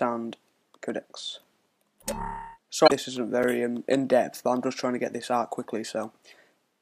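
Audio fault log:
2.84–2.92 s and 5.63–5.65 s, damaged data in a compressed stream: corrupted bytes made the decoder misread frames, lose sync and hunt for the next frame header, so the audio breaks into a brief chirp or squawk, about 80 ms and then about 22 ms long.
3.43 s, block of digital silence: a block of samples came out as zeros, probably an output buffer that wasn't filled in time. The sound drops out for 5 ms with no fade, and the abrupt edges produce a sharp tick.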